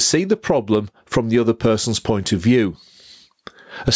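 Gain pumping runs through the whole speech clip. The gain swings by about 25 dB. Loud and soft parts sit squashed together. The likely cause is gain set far too high, with a fast limiter clamping down.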